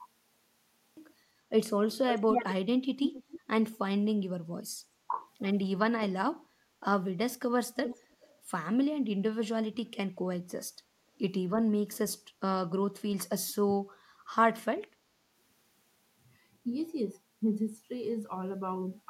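The first 0.97 s are digital silence, and the speech then begins abruptly mid-sound with no natural attack. This is a cut-off start: the capture began late, so the opening of the utterance was never recorded.

From 2.1 to 2.54 s, and again from 3.03 to 3.39 s, a delayed copy of the speech trails the original by 261 ms. The first copy is roughly as loud as the direct speech and the second about 5 dB quieter. This echo leak likely comes from a far-end loudspeaker whose echo canceller let part of the returned signal through.

At 6.61 to 6.65 s the speech dips sharply, by roughly 15 dB, for about 40 ms. This is speech suppressed in double talk, likely the echo canceller mistaking overlapping talk for echo and briefly attenuating the wanted signal.

From 7.75 to 8.34 s the echo leak returns with the same 261 ms delay, now around 10 dB below the speech and heard as a fainter trailing copy.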